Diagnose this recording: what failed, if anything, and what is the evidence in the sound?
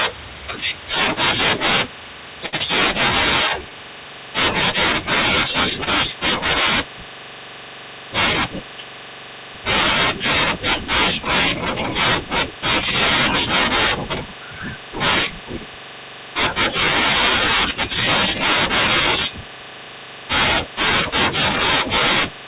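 The network and jitter buffer stalled twice: short stalls from late packets at 2.46 to 2.55 s and 5.84 to 5.89 s, where the sound is held for 66 ms and 27 ms. The buffer ran dry, the last sound was stretched, and playback resumed where it stopped. Unlike loss, nothing goes missing.

Just after the first stall, at 2.57 to 2.62 s, comes a short concealed packet loss at the network stage. About 60 ms of audio never arrived in time, and 30 ms of extrapolated sound covers the gap, so the delay drops back by about 30 ms. It is heard as a brief smear within the band-limited, sub-4 kHz sound of the G.711 A-law call path, and unlike a stall, real content is actually lost.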